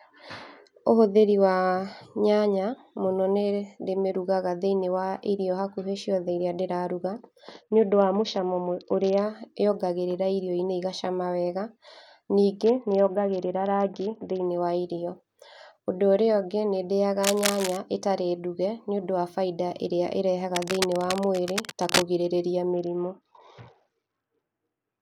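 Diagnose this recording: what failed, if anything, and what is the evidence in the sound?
Bluetooth SBC bit pool drop, at 7.52 to 9.22 s, 12.64 to 14.46 s (ending just before "wa irio"), and 22.73 s to the end of the clip. This is a codec-stage fault on the wireless link. In each stretch the speech turns dull and a gritty quantisation noise rises; in the first two it clears when the rate recovers. The sound fits a bit pool falling from 28 to 7, about 66 kbps. At that rate the upper sub-bands get almost no bits and the remaining bands are coarsely quantised.

Cable scratch noise, at 17.23 to 17.77 s (just after "ũrĩa ũngĩ nĩ ndĩyaga") and 20.53 to 22.03 s (just after "nĩũndũ wa bainda ĩrĩa"). This is in the analogue wiring. Dense, uneven bursts of scratching and rustling sit over the speech, only a little below its level. The likely cause is a worn cable, connector or control being moved, so that its contact resistance changes rapidly and injects irregular noise into the signal path.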